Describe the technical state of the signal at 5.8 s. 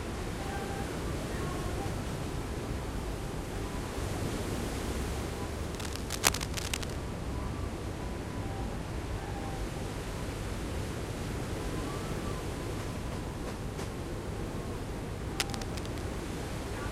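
At 5.8 s the signal is inside a burst of cable scratch noise running from 5.71 s to about 6.96 s. It sounds like scratching and rustling laid over the sound, roughly as loud as the sound itself. The likely cause is a worn cable, connector or control being moved, its contact resistance jumping erratically. A spectrogram would show dense, irregular broadband streaks across that span, and the waveform would carry ragged, uneven spikes.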